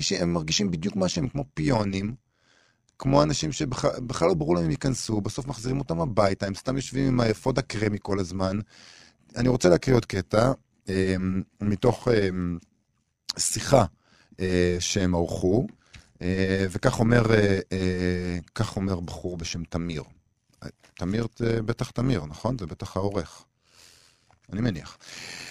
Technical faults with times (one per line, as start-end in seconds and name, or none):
0.00-25.51 overlap-add ripple